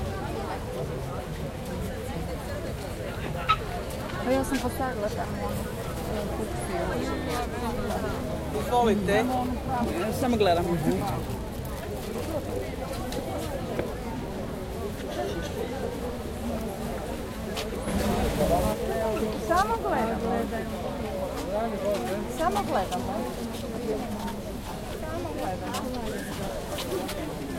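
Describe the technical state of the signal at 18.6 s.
A sudden gain jump, likely a digital gain step applied without a ramp, lifts the sound and its background noise together by about 6 dB from 17.88 to 18.73 s.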